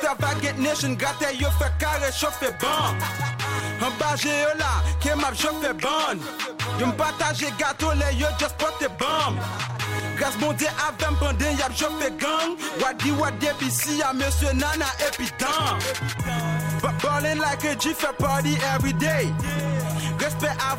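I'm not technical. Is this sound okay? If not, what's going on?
Yes, this one's fine: nothing in it drops out, crackles, skips or jumps, so you can relax about it.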